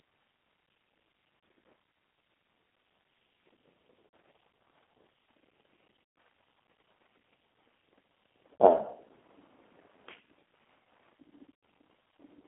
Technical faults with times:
0.00-12.48 G.729 codec
1.39-1.43 VoIP packet loss concealed by the speech codec
4.07-4.13 VoIP packet loss concealed by the speech codec
6.04-6.16 VoIP packet loss concealed by the speech codec
8.59-8.62 VoIP packet loss concealed by the speech codec
11.55-11.63 VoIP packet loss concealed by the speech codec

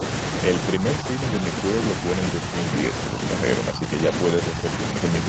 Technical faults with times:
0.76-0.84 speech suppressed in double talk
3.71-3.98 speech suppressed in double talk

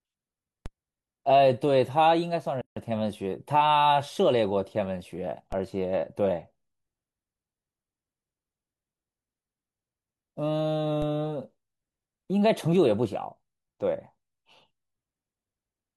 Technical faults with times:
0.66 DC step
2.61-2.77 gap at a join of encoded pieces
5.52 DC step
11.02 DC step

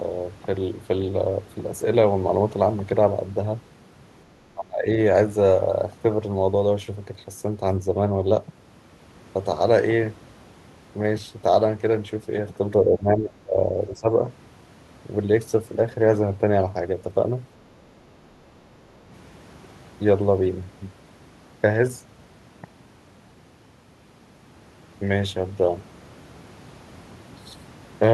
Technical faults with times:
4.54-4.87 speech suppressed in double talk
12.84-13.57 speech suppressed in double talk
13.92-14.07 speech suppressed in double talk

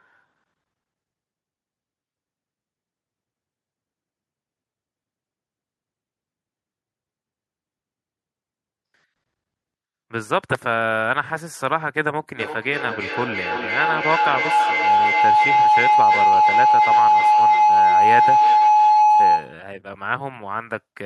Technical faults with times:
12.36-19.65 feedback howl

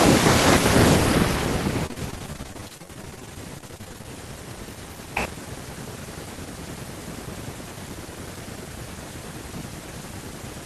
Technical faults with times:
1.86-4.05 repeated packet loss (robotic sound)

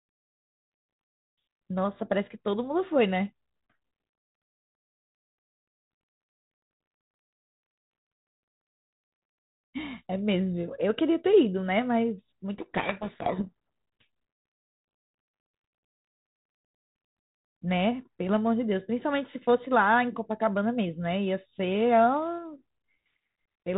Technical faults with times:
12.58-13.49 codec payload misread

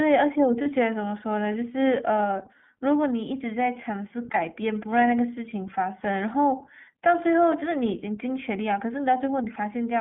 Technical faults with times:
0.00-10.01 iLBC codec
0.62-0.67 lost iLBC frames
4.32-4.38 lost iLBC frames
7.59-7.63 lost iLBC frames

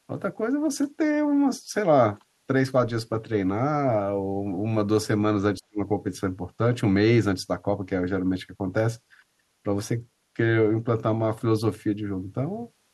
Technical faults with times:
5.58-5.80 speech suppressed in double talk

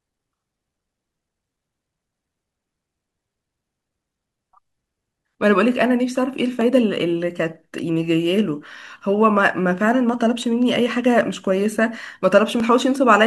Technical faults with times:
6.61 overlap between stream segments
12.60 overlap between stream segments

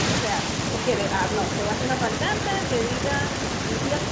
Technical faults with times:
none

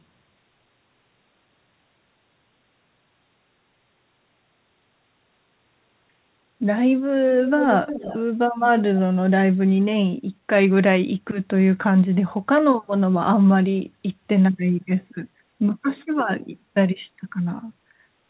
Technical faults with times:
7.45-8.20 echo leak
8.55-9.00 echo leak

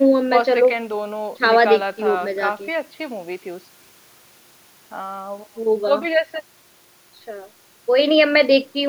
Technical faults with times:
none

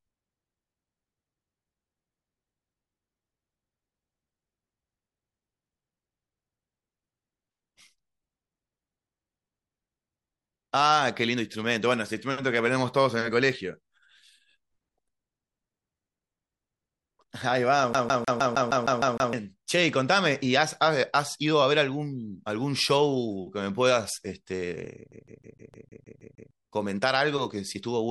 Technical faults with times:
17.93-19.33 CD stuck on one turn
25.11-26.51 CD stuck on one turn

